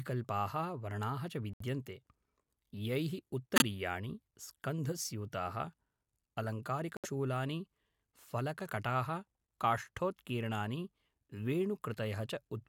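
Corrupt frame muted at 1.53–1.62 s (right after "वर्णाः च"), 3.56–3.62 s and 6.97–7.06 s: damaged compressed frames were rejected and replaced by silence, cutting abrupt gaps two or three frames long while timing holds.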